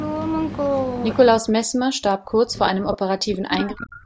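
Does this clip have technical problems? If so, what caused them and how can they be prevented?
Yes. From 1.4 s to the end of the clip, the speech is suppressed in double talk. For about two seconds in all, the voice dips, thins or breaks into pieces, at its deepest falling about 40 dB. This is likely an echo canceller that could not separate the near talker from loudspeaker echo while both sides spoke, so it turned everything down. Unlike a network dropout, the loss is a gain reduction tied to overlapping talk, not sudden gaps or garbled frames. Tuning the canceller's double-talk detection, or using a headset so there is less echo to fight, prevents it.

From 2.93 to 2.97 s there is an echo leak: a brief scrap of voice returns 318 ms late, about 10 dB below the speech. The likely cause is a far end playing the call on a loudspeaker whose canceller let some of its microphone pickup through and sent it back. 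Room reverberation would trail smoothly off the original sound, whereas this is a separate, delayed copy. Better far-end echo cancellation or headphones on that side would prevent it. The call's microphone processing, with nothing above 8 kHz, is not a fault here.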